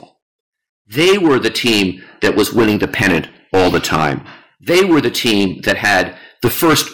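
Hard clipping runs through the whole speech clip. The signal is driven about 15 dB past what one stage can pass, so peaks are sliced flat. About 7 percent of samples hit that ceiling. Every loud syllable carries a harsh, gritty fuzz.

From 3.11 to 3.35 s there is DAB burbling. Bit errors got past error correction into the MP2 audio data. Corrupted samples put short blips of noise into single frequency bands. The result is a patch of brief noise blips over the speech.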